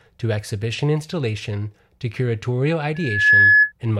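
Loudspeaker feedback squeal runs from 2.95 to 3.72 s, just after "exhibition installation to curatorial". A microphone is picking up the loudspeaker it drives, and at one frequency, 1.7 kHz, the gain around that loop is greater than one, so the tone keeps feeding itself. It swells over a little under half a second into a piercing whistle that sits roughly 10 dB above the speech.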